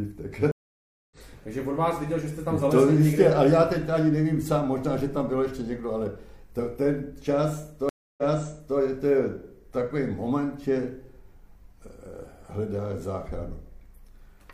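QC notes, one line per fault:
0.51–1.17 s, stream reconnect: the connection drops and the sound goes silent for about 0.60 s while the player reconnects and starts a new decoder. It then picks up roughly 0.4 s further on, so that stretch of the live stream is simply missing.
7.89–8.78 s, stream reconnect: a shorter 0.29 s gap, but playback resumes 0.60 s earlier than where it stopped. The server resends a burst of buffered data, so a short stretch is heard twice.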